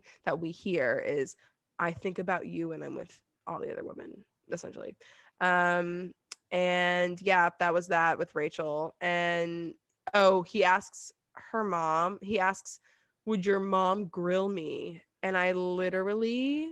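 No technical faults are audible.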